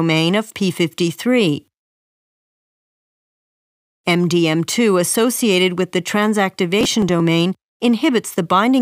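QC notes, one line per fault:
6.81–7.20 s, processor overload crackle: a burst of gritty crackle where roughly ten short buffers, around 5 ms each, miss their deadlines in quick succession. Each missed buffer is skipped, leaving a hard-edged gap, and the run of gaps reads as tearing until the load clears.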